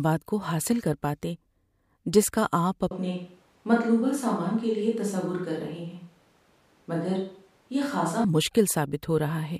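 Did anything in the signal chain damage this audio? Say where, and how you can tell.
Yes. From 2.91 s to 8.24 s the speech turns suddenly roomy and hollow, with thinner bass, a level drop of around 5 dB and a raised noise floor. This is likely a switch to a distant microphone at the capture stage, after the close microphone's feed dropped out. On a waveform the envelope steps down and back up abruptly at both edges. On a spectrogram the low end thins, reverberant tails blur the gaps, and the background fills in.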